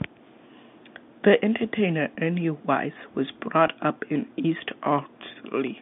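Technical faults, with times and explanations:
2.15–2.17 s, 3.67 s (just before "up in") and 5.29 s: packet loss with pitch repetition. The speech briefly catches on a slightly held, buzzy tone. When audio went missing, the receiver filled the gap by repeating the last pitch cycle. The first gap lasts 20 ms and the other two about 10 ms, which fits two lost packets and then one lost packet each. Because the gaps are this short, the sound never fades to silence. That sets it apart from a dropout or a muted gap. The bandlimited telephone-line sound around these moments is steady.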